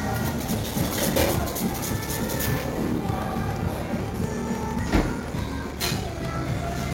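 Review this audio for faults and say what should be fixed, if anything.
From 0.35 s to the end at 6.93 s there is a block size mismatch (padded). Blocks of 1024 samples are read into larger slots, consistent with 1152, and zero-filled. This produces a 38.3 Hz buzz and playback at 0.889 speed with timbre intact. The waveform shows regular flat gaps, and a spectrogram shows vertical stripes at that rate. To prevent it, make the writing and reading stages agree on one block size.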